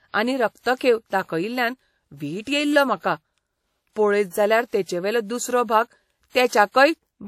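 WMA compression runs throughout the speech, with plainly audible codec damage from start to finish. The sound has a ringing, washy quality, and a hiss swells and fades with the speech rather than sitting steadily underneath it. Nothing remains above 16.6 kHz. This likely comes from a Windows Media Audio encoder working at a low rate, which fits roughly 48 kbps: its long transform blocks smear quantisation noise across tens of milliseconds and zero out weak spectral detail.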